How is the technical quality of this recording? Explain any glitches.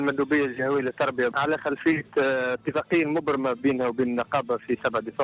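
No glitches to speak of here; the sound just runs through a standard narrowband call path, and the top end stops at about 4 kHz, which fits a G.711 mu-law phone codec.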